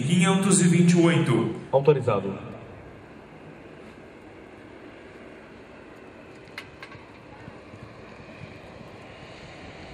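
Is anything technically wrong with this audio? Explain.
Yes. Sample clock jitter runs through the whole clip. The converter's clock wanders by roughly a microsecond, so each sample lands slightly early or late at random. The resulting error depends on how fast the waveform is changing, so steep, loud and high-frequency passages pick up the most, with noise sitting around 40 dB below the signal. It comes through as a faint hiss or grainy roughness that swells with bright, loud material and disappears in silence.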